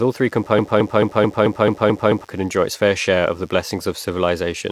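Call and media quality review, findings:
Mains buzz, throughout: steady raspy buzz on 50 Hz mains, roughly 35 dB below the speech. Switching spikes from a dimmer, rectifier or missing shield, twice per cycle. Harmonics reach several kHz, unlike a pure low hum.

Broken-record loop, 0.59 to 2.24 s: after "all three", a 219 ms fragment repeats 8 times, back to back, before "could enjoy its fair". Likely a stalled player, encoder or stream resending its last fragment. Exact, undecaying repeats, unlike echo. Intervening audio lost.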